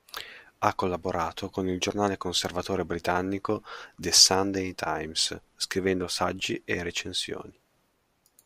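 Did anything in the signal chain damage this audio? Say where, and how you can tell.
Yes. There is a block size mismatch (truncated) at the driver or buffer stage, present throughout the speech. A steady 43.1 Hz buzz, which fits 1024-sample blocks, comes from each block's tail being discarded at the boundary, though the speed stays at about 1.0x.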